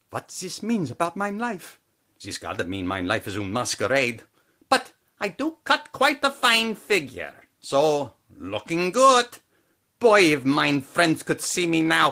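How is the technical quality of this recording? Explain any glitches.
No technical faults are audible.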